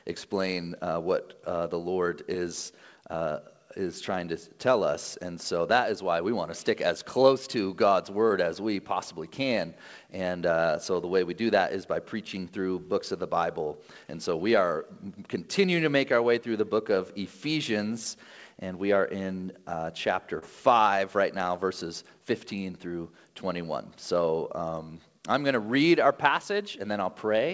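At 2.34 s, 8.29–8.31 s and 20.39–20.43 s, short concealed packet loss: about 10, 10 and 30 ms of audio arrived too late, and the decoder extrapolated the preceding sound before crossfading back. Each gap is a brief smear or wobble.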